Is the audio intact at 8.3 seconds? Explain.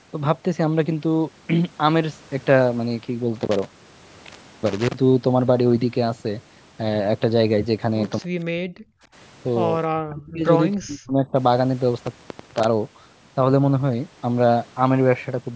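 No. From 8.03 to 9.23 s an intermittent contact opens the line for about 0.89 s. The sound cuts out with crackle at each edge, leaving faint hiss. Within that stretch, from 8.31 to 8.36 s, the level dips by roughly 30 dB. This is likely speech suppressed in double talk, where the echo canceller turned the talker down while the far side spoke.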